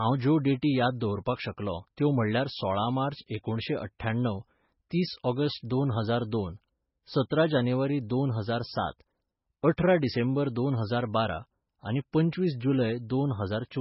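From start to finish the speech carries heavy codec damage, most likely MP3 compression at a very low bitrate, around 16 kbps. The treble is cut off hard, with nothing above about 5.6 kHz, so sibilants lose their edge and sound dull. Because so few bits are available, weak frequency components are zeroed and then reappear from one frame to the next. That gives the voice a watery, swirling texture, with metallic chirps on s sounds and smeared consonant attacks.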